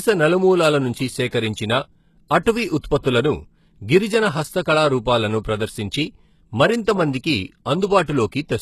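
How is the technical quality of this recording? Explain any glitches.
The technical quality is compromised by plainly audible codec damage throughout and four audible smears before attacks.

The whole speech track has plainly audible compression damage, likely from HE-AAC compression at a very low bitrate, around 16 kbps. Nothing is present above 12.3 kHz. The treble is synthesised from copied lower bands, so its harmonics misalign. Sibilants sound gritty and metallic.

Pre-echo occurs at 1.27, 2.41, 2.79 and 8.04 s. Each lasts 42 to 54 ms. The codec spreads noise across a block, so noise meant for a loud attack leaks into the quiet just before it. A brief hiss precedes each onset, and the attack sounds softened.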